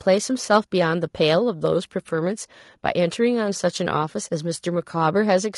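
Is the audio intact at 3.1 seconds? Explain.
No. The speech at 3.1 seconds is rough and grainy throughout, with noise between harmonics, likely low-delay AAC compression. Short frames blur pitch harmonics, unlike swirly long-frame codec artefacts, fitting roughly 32 kbps.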